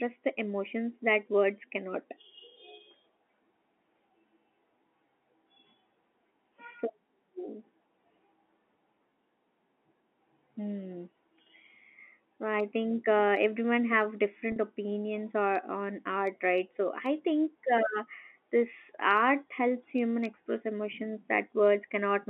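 A telephone-band speech recording, with the sound confined to roughly 250 Hz to 3.4 kHz of G.711 line coding, has a brief held, buzzy tone at 14.52 to 14.56 s, right after "think uh everyone have". That is packet loss with pitch repetition: about 40 ms of audio went missing, which fits two 20 ms packets, and the receiver filled the gap by repeating the last pitch period before the speech resumed.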